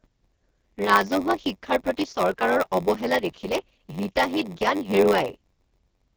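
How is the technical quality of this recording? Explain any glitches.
Technical quality is poor: two faults run through the whole speech clip, a heavily degraded wideband codec and a periodic buzz from a block size mismatch.

AMR wideband (HD Voice) codec, throughout: the speech has the rough, raspy texture of AMR-WB at its bottom rate, which fits 6.6 kbit/s. At that rate the pulse-driven vocal tract model is too coarse to track the voice closely, so the damage is heavy. Nothing is present above 7 kHz. The topmost band is synthetic noise rather than real speech detail, giving the highs a hissy, smeared quality.

Block size mismatch (padded), throughout: a steady buzz at 93.8 Hz sits under the speech. Each block the reading stage takes is only partly filled by the stage feeding it, which fits a 512-sample read buffer. The remainder is zero-padded, so a short silent gap recurs once per block, and that repetition is the buzz. 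The padding also stretches time to 0.938 of normal speed, so the speech drags slightly while its timbre stays about where it should.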